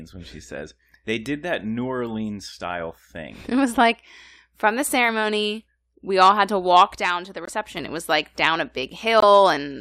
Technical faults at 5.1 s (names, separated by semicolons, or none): none